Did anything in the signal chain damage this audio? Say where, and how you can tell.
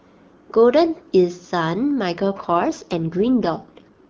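Yes. An AMR rate drop in the network and codec stage begins at 2.14 s and lasts to the end of the clip at 4.10 s. From that point the speech turns rougher and more synthetic, but the bandwidth holds and there is no gap. That pattern points to the link ordering the AMR wideband codec down to a lower mode, which fits a step from 23.85 to 8.85 kbit/s, with more bits going to error protection and fewer to the speech itself.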